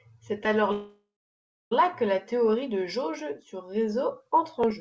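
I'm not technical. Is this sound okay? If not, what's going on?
No. There is a call audio freeze. Between 0.72 and 1.73 s the speech stops, most likely because the call's data got held up on the way and the receiving end ran out of sound to play. It filled the wait by stretching the last sound into a fading buzz or hiss, then about 0.64 s of silence. The speech then resumes at "que la théorie de" with nothing lost, just arriving about a second late.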